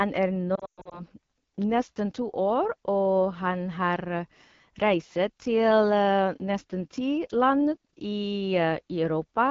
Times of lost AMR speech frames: 0.55-1.02

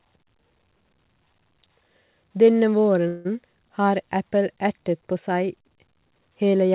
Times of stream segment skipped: none

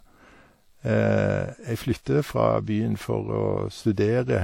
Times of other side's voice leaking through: none

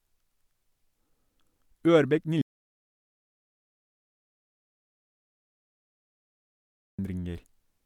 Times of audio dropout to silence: 2.42-6.99

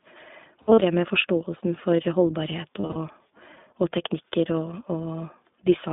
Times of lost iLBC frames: 0.62-0.83, 2.80-2.96

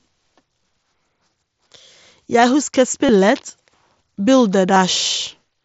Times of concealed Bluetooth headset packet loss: 3.06-3.09, 4.74

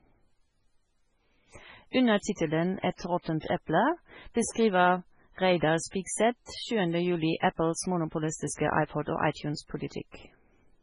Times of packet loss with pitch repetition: none

